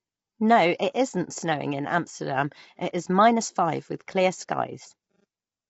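Throughout, speech sounds grainy, with noise filling between harmonics and nothing above 7.7 kHz. It's likely low-delay AAC compression, whose low 24 kbps bitrate makes the voice rough.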